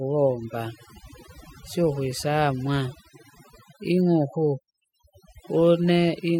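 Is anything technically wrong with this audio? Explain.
Yes, there's overdone noise removal running through the whole speech clip. The denoiser was set too hard, so any frequency band sitting near its noise estimate gets pulled way down, taking quiet bits of the voice too. The background drops and breaks up into twinkly specks.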